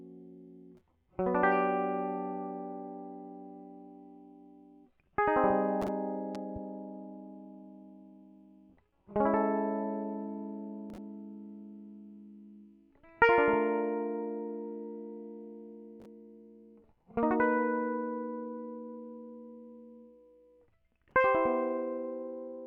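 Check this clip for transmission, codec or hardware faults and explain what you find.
One hardware fault is audible in this music: a loud pop, heard as two sharp thumps between 6.35 and 6.59 s. The music carries on underneath while two pulses peak roughly 5 dB above it. The cause is likely a voltage step from a plug, switch, static or driver glitch entering the signal path, shaped by the following circuits. On a waveform these show as two abrupt spikes; on a spectrogram, two thin vertical broadband stripes.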